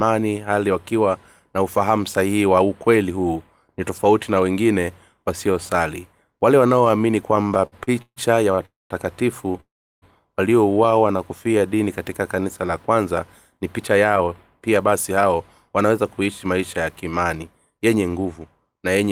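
From 7.43 to 8.59 s the speech breaks into repeated stalls (stutter). Packets arrived late or too slowly, and the jitter buffer kept running dry. Ten times the receiver stretched the last sound to cover the wait, filling 320 ms in all, with the longest gap 143 ms and about 28% of the span concealed. Nothing is lost, but the speech lurches and drags. A spectrogram shows repeated short patches of smeared, held harmonics between normal segments.

Two call audio freezes follow, at 8.65 to 8.92 s and 9.60 to 10.04 s, most likely caused by packets held up in transit so that the buffer emptied completely. Each begins with a brief continuation of the last sound that fades out, leaving silence for about 180 ms and then 350 ms. Speech then resumes exactly where it stopped, so 247 ms and 416 ms of delay are inserted without anything missing. On the waveform these appear as a short decaying tail followed by a flat stretch.

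Between 10.86 and 11.68 s a jitter buffer slow-down adds 96 ms by repeating single pitch periods and bits of pause, so the speech runs at about 89% speed. The pitch stays the same while sounds are drawn out. In the spectrogram the harmonic lines keep their height but stretch horizontally, and the waveform shows repeated identical cycles.

Jitter buffer speed-ups run from 13.57 to 14.28 s and from 14.68 to 18.41 s. Here the receiver trimmed a surplus of buffered audio, roughly 70 ms and then about 300 ms, by cutting short pieces of one or a few pitch periods again and again. Speech plays at about 108% speed at unchanged pitch and sounds hurried. Harmonic tracks stay level but are compressed in time, with tiny splice points where cycles were removed.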